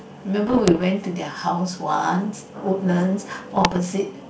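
From 0.47 to 0.84 s and 3.51 to 3.79 s, bit errors on an ADPCM link derail the decoder's predictor, causing ringing pops and rough bursts rather than packet-loss silences.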